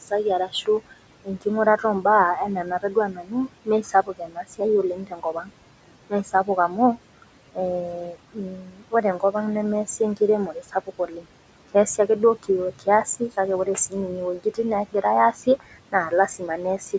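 Noise suppressor artifacts run through the whole clip. The suppressor pulls steady room noise down by about 18 dB, frame by frame. The leftover background dips between phrases and swells under the speech.

Speech cut by the noise suppressor comes in four stretches. From 0.08 to 2.05 s, about a third of a second of speech is turned down, by up to about 16 dB. From 2.64 to 5.5 s, roughly a second is affected, again up to about 16 dB. From 6.1 to 7.58 s, a fifth of a second drops by up to about 14 dB. From 8.12 to 16.94 s, about a second and a half is turned down, with the deepest drop at about 19 dB. In each case the suppressor mistook quiet parts of the speech for noise. Soft consonants and word endings sound swallowed or faint.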